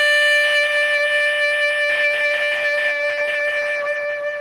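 A music clip with hard clipping from the start to 0.95 s. The signal is driven about 3 dB past what a stage in the chain can pass, so the peaks are sheared flat. Those flat tops add upper harmonics, heard as a crackly edge on the loud moments. From 1.9 s to the end, a call bitrate drop makes the music rough and watery. The encoder is coding far more coarsely, which points to the rate falling from roughly 32 kbps to about 13 kbps after the call's bandwidth estimate collapsed. It stays at its lowest for about 1.5 s.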